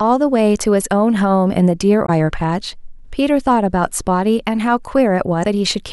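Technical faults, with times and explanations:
2.03–2.09 s and 5.40–5.45 s, damaged data in a compressed stream: two short glitches cut into the speech where the compressed frames are corrupt. The decoder can't parse them, loses its place and hunts for the next valid frame header, so the sound breaks up briefly.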